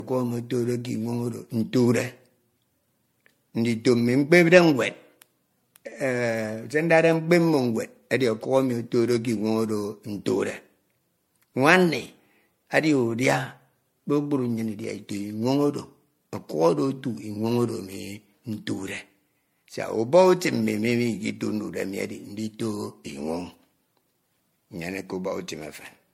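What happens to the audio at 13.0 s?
At 13.0 s the speech carries generation loss, which runs through the whole recording rather than starting at that moment. The sound is swirly and hollow, with smeared consonant attacks. Nothing is heard above 16.5 kHz. The likely cause is repeated lossy encoding, about five passes, and the character fits a 64 kbit/s MP3. Each pass re-quantises on a shifted frame grid, so noise and spectral gaps pile up.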